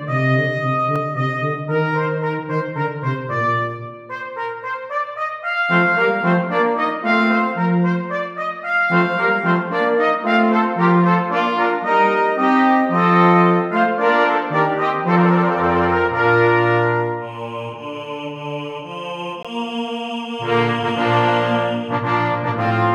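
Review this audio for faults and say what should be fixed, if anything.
Two blocks of digital silence occur, at 0.96 s (about 2.4 ms) and 19.43 s (18 ms). The signal drops to silence and returns with no fade: the first is a tick, the second a short hole. A smoothed or repeated dropout would not have these abrupt edges.

Prevention: make sure the audio callback always fills its output buffer in time, using more processing headroom or a larger buffer, and guard against invalid values reaching the output.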